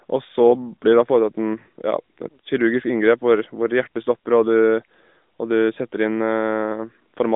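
At 1.60 to 1.68 s there are lost AMR speech frames, a gap of 80 ms that fits four 20 ms frames. The narrowband decoder repeats its last good settings at falling gain. The speech smears briefly and sags. Then it returns rough for a moment.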